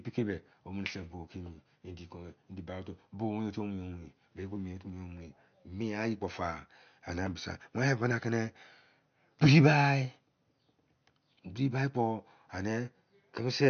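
The clip is speech with MP3 compression damage that runs the whole way through. Nothing is heard above about 6.5 kHz, so the top end is cut cleanly and s sounds lose their crispness. The coding damage is plainly audible. The likely cause is an encoder short of bits. It discarded the treble at a fixed cut-off and dropped weaker frequency detail from frame to frame. That fits a low bitrate of around 50 kbps.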